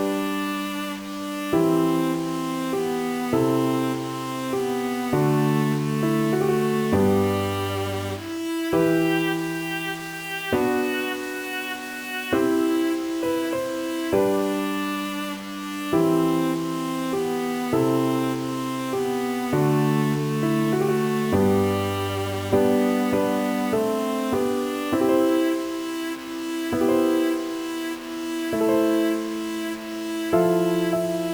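A stuck bit runs through the whole audio: harsh, buzzy distortion, with pauses filled by noise at around -35 dBFS, likely from one broken data line. Unlike clipping, it doesn't depend on loudness, and the silences never fall clean.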